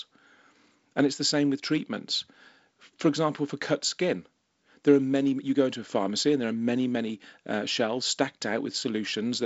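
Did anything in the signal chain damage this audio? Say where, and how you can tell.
No, nothing in the chain damaged this speech: it passes through a wideband telephone codec whose band limit near 7.7 kHz and light upper-band hiss fit G.722 at around 48 kbit/s, working as designed.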